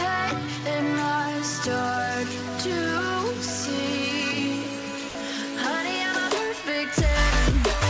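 At 5.09 s the sound gives way to steady comfort noise for 60 ms, likely sound dropped by the voice detector; unlike a packet-loss gap, it's smooth noise rather than a smeared repeat. The audio stops at 8 kHz, as the G.722 call path sends it.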